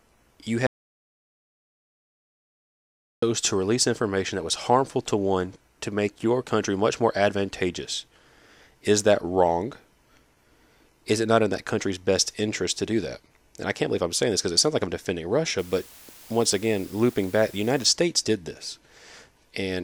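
From 0.67 to 3.22 s, the input was likely lost, through a disconnected device, failed link or stray mute, while the recorder kept writing silence. This audio dropout to silence cuts the speech into 2.56 s of dead silence with no room tone, resuming at "to release information that".

From 15.59 to 17.86 s, just after "sounds like I'm defending", the signal drops to low bit depth with dither, consistent with 8 bits, so the rounding error becomes broadband noise. It sounds like a constant, even hiss roughly 25 dB below the speech, without distortion.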